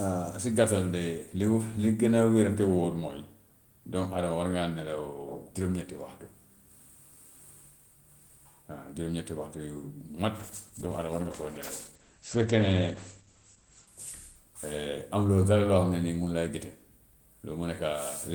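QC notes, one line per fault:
10.4–15.1 s, call bitrate drop: sound turns coarse and muffled as the encoder is starved of bits, consistent with a fall from about 32 to 12 kbps. Bandwidth shrinks from 20 kHz to 8 kHz, worst for 3.2 s. The spectrogram shows a flat ceiling at 8 kHz.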